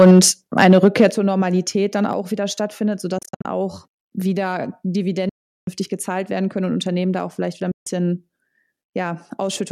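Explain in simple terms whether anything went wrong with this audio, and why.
Microphone overload at 0 to 0.27 s and 0.59 to 1.06 s: the loudest speech sounds harsh and crackly, likely because the input was set too high and peaks got flattened.

Microphone volume stepped down at 0.11, 1.11 and 2.13 s: the level drops suddenly each time, likely the call software turning the microphone down.

Bluetooth dropout at 3.18 to 3.45 s (several short gaps), 5.29 to 5.68 s and 7.71 to 7.87 s: the sound cuts out abruptly, likely from late wireless packets, then resumes further on.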